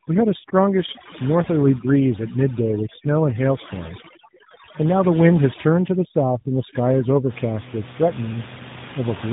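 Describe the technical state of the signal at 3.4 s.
At 3.4 s you're hearing two faults stacked. The first is tandem speech coding, present for the whole clip: the call passed through GSM full rate, then G.711, then AMR-NB at 12.2 kbit/s. That's two speech codecs in a row, each re-encoding the other's damage. The result is rough, muffled and warbly, with nothing above 3.8 kHz.

The second is overdone noise removal, running from 0.0 to 7.29 s. The suppressor is chopping out frequency bands it judges too close to the noise, and the room noise, only about 13 dB below the speech, sits close enough that quiet parts of the voice get cut too. The background drops and breaks up into twinkly specks.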